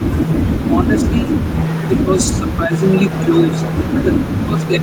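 An echo canceller at a loudspeaker end likely failed to remove all of the returned speech. This echo leak runs through the whole clip: a delayed copy trails the speech by about 292 ms, roughly 15 dB below it, as a faint repeat.

The same canceller likely mistook simultaneous talking for echo and turned the near talker down. This speech suppressed in double talk cuts the level by about 20 dB for roughly half a second between 0.74 and 1.32 s, by about 10 dB between 1.87 and 2.86 s, and by about 20 dB again from 4.05 s to the end.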